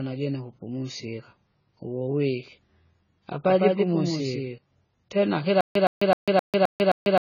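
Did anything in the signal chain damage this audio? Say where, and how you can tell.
Yes. The codec stage left AAC compression damage across the whole speech clip: nothing above 7 kHz, with a dull, smeared, fizzy texture on sibilants. That fits AAC-LC at roughly 16 kbps quantising coarsely. A spectrogram shows a hard ceiling at 7 kHz and patchy holes below it.

From 3.44 to 4.58 s there is a doubled audio track. A full-band copy about 5 dB quieter trails by roughly 150 ms, with no decay or room colour. It starts and stops abruptly, most likely from a second, slower capture path at the driver or buffer stage. The waveform shows every transient twice.

From 5.61 s to the end, playback shows a stutter with silent gaps. A 116 ms fragment repeats six times on a 262 ms cycle, separated by 145 ms of digital silence. That points to a likely stalled player or stream replaying its last buffer. The waveform shows identical blocks separated by flat silent stretches.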